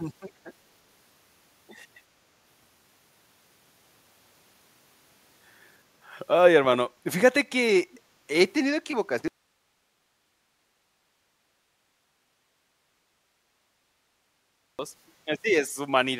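Echo leak at 7.93 to 7.98 s: a brief, faint copy of the speech returns about 332 ms late, roughly 30 dB below the main level. The likely cause is a far-end loudspeaker whose echo canceller let part of the pickup back into the call.

Audio dropout to a faint residue from 9.28 to 14.79 s: the speech cuts off abruptly for 5.51 s, leaving only hiss about 45 dB down. This likely comes from the wanted signal being lost while the path after the break stayed open.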